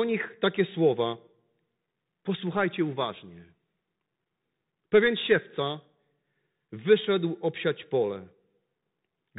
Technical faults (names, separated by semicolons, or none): Bluetooth CVSD headset codec